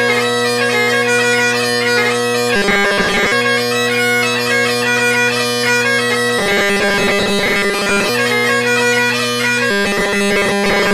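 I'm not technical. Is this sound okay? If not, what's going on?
No. The audio likely arrived too slowly, so playback kept repeating tiny 5 ms slices, causing robotic sound from repeated short buffers: a rigid, metallic 200 Hz buzz at 2.56–3.32 s, 6.39–8.09 s and 9.71 s to the end.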